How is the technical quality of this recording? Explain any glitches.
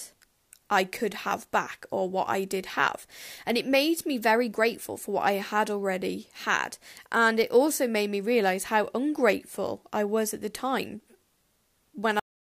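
The recording has one clear glitch, right at the end. At 12.20 s the speech stops abruptly in the middle of a sound and drops straight into dead digital silence, with no natural decay or room tail, for the final 0.38 s. This is a cut-off end: the last stretch of audio buffers was never written to the file or played out, so the waveform simply ends where the capture or export stopped instead of fading naturally.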